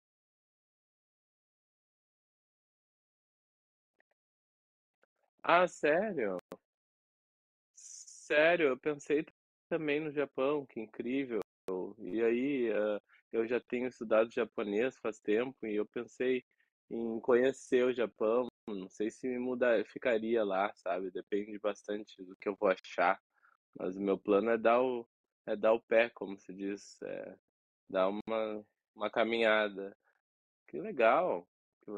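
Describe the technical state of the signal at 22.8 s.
At 22.79 s the speech drops to silence for about 51 ms, then resumes at 22.85 s. This is a Bluetooth stall. Radio interference likely held back packets, so the headphone buffer emptied and playback paused until the resent data arrived.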